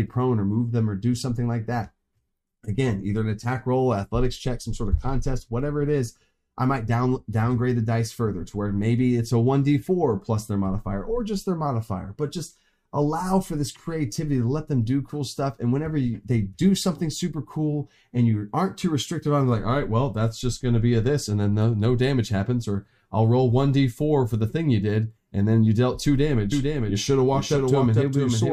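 At 26.52 s a doubled audio track begins abruptly and runs to the end: a full-band copy, about 5 dB quieter, trails the original by roughly half a second, with no decay or room colour. It is likely a second, slower capture path mixed in alongside the first.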